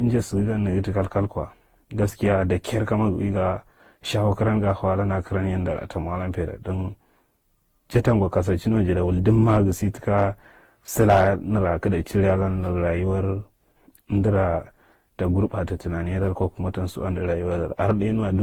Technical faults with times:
0.00-18.43 generation loss

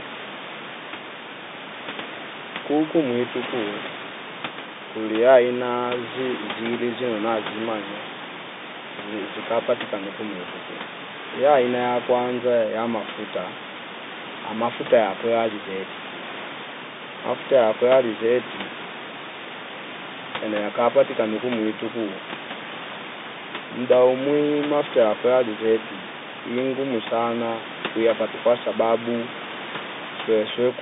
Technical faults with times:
none

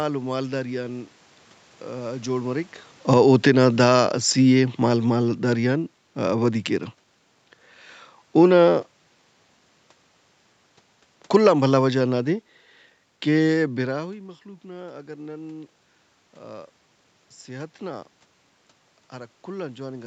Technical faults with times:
2.98-6.63 automatic gain falling
11.23-14.02 automatic gain falling

